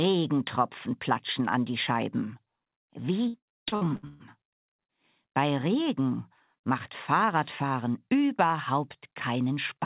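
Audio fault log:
3.28 to 4.92 s, repeated packet loss (robotic sound): over this stretch the audio keeps dropping out in a rapid series of holes, about a dozen of them, the longest around 124 ms. Each hole gets papered over by stretching the last bit of sound, so about a third of the span is concealment rather than real audio. The patching keeps repeating, which gives the choppy, robotic quality, with chunks missing. The whole thing sits in the narrow, nothing-above-4 kHz band of a telephone-grade call path.
7.94 to 8.45 s and 9.14 to 9.79 s, jitter buffer speed-up: in both of these spots the audio runs at about 107% speed while the pitch stays put. That's the receiver trimming its backlog after packets bunched up. It snips out tiny pitch-period-sized slivers many times in a row, a few tens of milliseconds in total each time. The result is a slightly hurried, rushed feel without any pitch shift.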